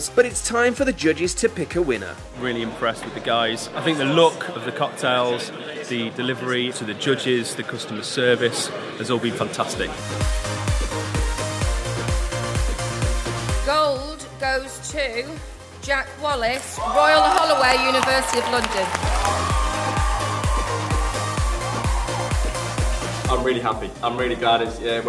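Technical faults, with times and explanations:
Nothing here to flag: no technical faults turn up anywhere in the recording.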